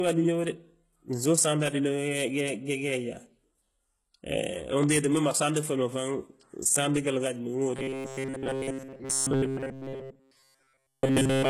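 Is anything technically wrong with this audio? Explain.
Yes. The speech carries three distinct technical faults.

Throughout the clip, the treble sounds gritty and metallic, and s sounds come out lispy or smeared. This is heavy HE-AAC compression damage, likely from very low-bitrate encoding, which fits HE-AAC v2 at around 16 kbps. The codec transmits only the lower spectrum and synthesises the upper bands by copying lower content upward under a coarse envelope. The rebuilt harmonics don't align with the real ones across the crossover, so the top end sounds artificial.

Between 4.83 and 4.98 s, two sharp pops land on top of the speech, roughly 10 dB above it, while the speech continues underneath. This is a loud pop, likely from a sudden electrical step or pulse such as a plug, switch, static discharge or driver glitch. The circuitry downstream shapes that pulse into an audible crack.

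From 7.76 s to the end, the speech turns into a rigid, metallic buzz at 134 Hz that only loosely tracks the original. This is a robotic sound from repeated short buffers, likely because audio is arriving too slowly. The software fills each gap by looping the last fragment of roughly 7.5 ms, and the repetition rate becomes the buzz pitch. Most of this stretch is repeated material rather than fresh audio.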